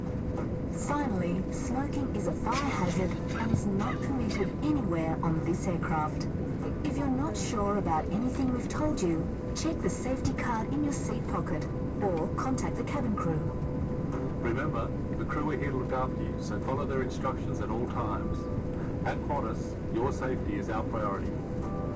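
No technical faults can be heard in this audio.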